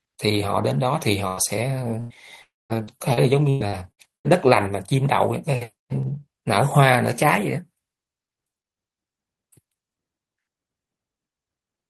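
At 1.27 s the speech smears into a brief held buzz or hiss that fades, then jumps ahead at 1.40 s. The same happens from 2.00 to 2.13 s. These are bursts of packet loss. Each time about 100 ms of consecutive audio never arrived in time, so the receiver stretched the last sound and lowered it while waiting, and that stretch of speech is gone.

Inside both bursts, at 1.37 s and again at 2.10 s, a single 20 ms frame sounds grainier and noisier than its surroundings. Each is a lost packet rebuilt from error correction. The following packet carried a low-bitrate backup copy of the lost one, so the decoder played that rough copy instead of leaving a hole.

From 2.42 to 2.73 s the sound turns into a fading buzz or hiss, then drops to silence for about 0.21 s before speech returns with roughly 0.28 s missing. This is a long network dropout, likely caused by no packets reaching the receiver for that whole stretch. 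Concealment kept the last sound going for a short while, then gave up and went quiet.

From 2.70 to 4.27 s the speech turns choppy, with six separate holes, the longest about 0.1 s, patched by about 0.36 s of stretched sound. Nearly a quarter of that span is filler. This is repeated packet loss giving a robotic sound. Losses kept recurring, and each hole was papered over just before the next one arrived. Around a tenth of a second in this stretch also comes from rough error-correction copies.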